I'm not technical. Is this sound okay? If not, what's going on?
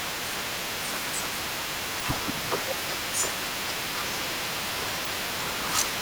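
No. There are two brief glitches in this speech, one from 1.98 to 2.02 s and another from 5.03 to 5.07 s, each lasting about 40 ms. Both come from damaged data in a compressed stream. A small piece of the saved or streamed file got scrambled, so the player decoded nonsense for a moment before finding its place again. That's why you hear a brief glitch at each of those spots.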